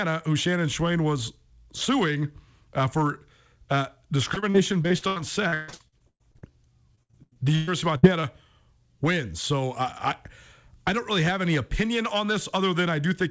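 From 4.34 to 6.52 s and again from 6.95 to 8.25 s, repeated packet loss (robotic sound) makes the speech choppy. Holes up to 138 ms keep being patched by stretching the last sound, so unlike one clean dropout, the gaps recur throughout.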